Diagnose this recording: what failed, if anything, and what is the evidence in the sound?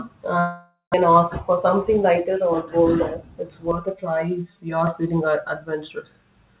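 Network stage, long network dropout. At 0.40 s the sound turns into a buzzy continuation of itself that fades away. About 130 ms of silence follows, and the audio returns at 0.96 s with roughly 0.4 s of material gone. The receiver was concealing a gap in which packets never arrived. The most likely cause is a burst of lost or stalled packets, with the delay shifting by around a tenth of a second.

Call processing stage, jitter buffer speed-up. From 1.08 to 2.48 s the speech runs at 105% of normal speed. From 2.96 to 3.51 s it runs at 108%. The pitch stays put, but the delivery sounds hurried. The receiver trimmed whole pitch periods to drain an overfull buffer. It removed about 70 ms in the first stretch and about 50 ms in the second.

Driver or buffer stage, channel delay (comb filtering). From 3.71 to 4.87 s, just before "feeling uh", the sound turns hollow and phasey. One channel lags the other by about 5 ms before the two are summed to mono. 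That cancels energy at regularly spaced frequencies. The first notch falls near 100 Hz, and further notches repeat every 200 Hz or so. They stay fixed across the G.711 call band, which stops at 4 kHz.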